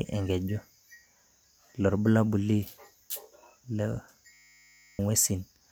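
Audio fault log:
4.33–4.99 s, system hang loop: a 10 ms slice of the speech repeats exactly, dozens of times, giving a steady 100 Hz buzz. The machine or driver stalled while the hardware kept replaying its ring buffer, so roughly 0.7 s of real audio is gone.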